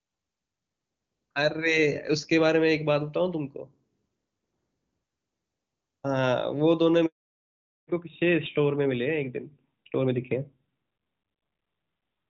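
A phone call recording, and at 7.06 s there's a handover gap: the voice drops out for 320 ms, until 7.38 s, while the call hops between networks and no speech frames get through, so whatever was said there is simply gone. Before that the HD Voice sound is clean and crisp, fitting the top AMR-WB rate. From 7.38 s to the end you get a fallback to narrowband. Nothing survives above 4 kHz, so the voice goes muffled and a bit rough, which fits AMR-NB at around 12.2 kbit/s taking over.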